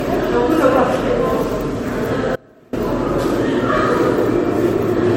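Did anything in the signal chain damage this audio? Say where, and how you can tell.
Yes. At the codec stage, the whole clip sounds swirly and hollow, with smeared attacks and nothing above 16.5 kHz. That's generation loss, likely from around five rounds of MP3 encoding at 64 kbit/s, each pass requantising on a shifted frame grid so the damage piles up.

There's also an audio dropout to a faint residue from 2.36 to 2.73 s. The sound cuts abruptly for about 370 ms, leaving only a faint trace about 25 dB down, then snaps back. It's likely a driver or buffer stall upstream while the path after it kept running.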